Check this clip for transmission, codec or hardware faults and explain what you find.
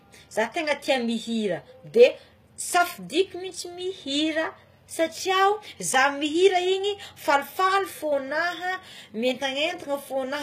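One codec fault runs through the whole speech clip. Throughout, the treble is bright but synthetic. S sounds turn gritty and lispy, and nothing sounds above 14.9 kHz. The likely cause is HE-AAC compression at a low bitrate, which fits about 20 kbps. The highs are rebuilt from copied lower bands, so their harmonics misalign.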